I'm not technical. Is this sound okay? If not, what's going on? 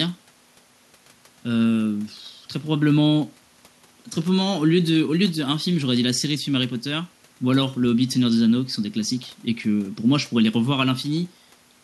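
Yes, this recording sounds fine, and nothing in it needs fixing. There are no glitches, dropouts or other problems to point out anywhere in the clip.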